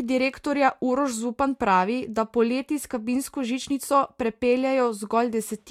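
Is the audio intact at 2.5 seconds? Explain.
Yes, at 2.5 seconds the speech plays through cleanly, with no dropout, click, distortion or other fault at that point.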